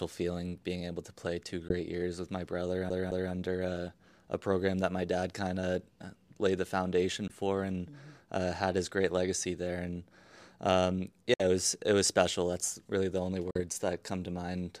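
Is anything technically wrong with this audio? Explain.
Yes, the speech has two kinds of fault.

Bluetooth dropout, likely: at 1.68, 7.28, 11.34 and 13.51 s, brief silent gaps cut in and the speech resumes as if it had played on. The waveform shows flat-line holes; the spectrogram shows clean vertical blank bands.

CD stuck on one turn: from 2.90 to 3.33 s, a 214 ms slice plays twice in a fast, even stutter with a short mute at each jump. The waveform shows identical repeated blocks.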